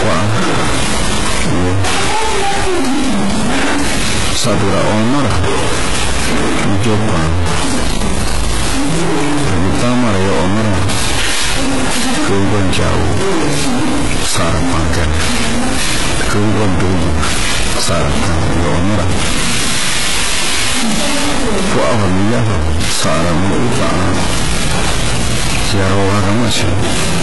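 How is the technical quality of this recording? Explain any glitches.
The quality is poor. Two problems run through the whole recording, start to finish.

Stuck bit: across the entire clip there's distortion riding on the speech and noise sitting in the pauses. The likely cause is a single data bit stuck at a fixed value, from a broken line or converter. About half the sample values get pushed off by that bit's weight, in a pattern that follows the waveform, so the error tracks the signal. And because small values near silence keep changing sign, the bit flips there too, so the gaps fill with noise instead of going quiet.

HE-AAC compression: also present throughout, with heavy codec damage and nothing above 11.5 kHz. This is likely HE-AAC at a very low rate, in the region of 12 kbps. The codec properly codes only the lower part of the spectrum and rebuilds the treble with spectral band replication, copying lower bands upward and shaping them with a coarse envelope. 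That synthetic top end doesn't line up harmonically with what's below the crossover, so s sounds come out gritty, metallic or lispy.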